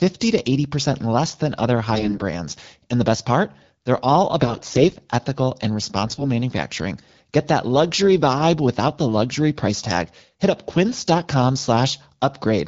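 From 1.94 to 2.20 s, 4.41 to 4.96 s and 6.06 to 6.26 s, AMR bit errors corrupt the weakly protected frame bits, misplacing excitation pulses and skewing pitch, gain and spectral detail. The AMR-WB speech keeps its pitch and level but turns hoarse and gargly, harshest in the first burst.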